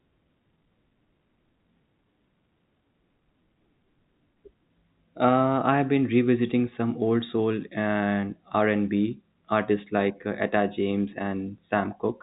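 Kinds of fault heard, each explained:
No faults heard in this speech.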